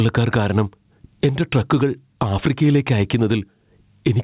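Gain pumping runs right through the speech. The level swings by something like 15 dB under each loud burst, so everything sounds squashed and breathing. Likely the input gain is set way too high, with a fast limiter clamping down.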